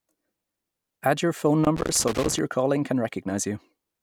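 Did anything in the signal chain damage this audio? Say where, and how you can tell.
Yes: loose connector crackle in the analogue wiring, 1.64–2.39 s, after "your phone". A contact making and breaking chops the speech into irregular scratching, unlike evenly spaced digital dropouts.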